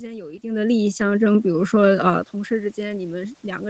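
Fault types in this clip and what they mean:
Automatic gain rising: the automatic gain control judged the incoming level too low and began turning its gain up from about 0.4 s, still climbing when the clip ends, so the speech and the room noise behind it swell together rather than the voice alone getting louder. That shared rise is what separates it from the talker shifting position around half a second and again near 2 s, which changes only the voice.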